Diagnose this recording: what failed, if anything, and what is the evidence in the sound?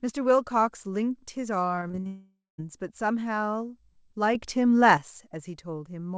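Network stage: from 1.76 to 2.07 s the speech turns choppy and robotic, with five short holes, the longest 45 ms, each patched by stretching the previous sound. Real audio survives between the holes, which separates this repeated packet loss from an outright dropout.

Network stage again: from 2.07 to 2.60 s about half a second of audio never plays. A concealment buzz fades out, roughly 160 ms of silence follows, and speech resumes with the lost part gone. The fading synthetic tail before the silence points to a long network dropout as the likely cause, rather than a mute or a gap in the source.

Call processing: between 4.35 and 4.97 s the level steps by about 6 dB from one sample to the next. Speech and background noise shift together, so the talker did not simply get louder. A sudden gain jump, likely from a gain setting applied without a ramp, fits this. The G.722 call path, with nothing above 8 kHz, carries the change.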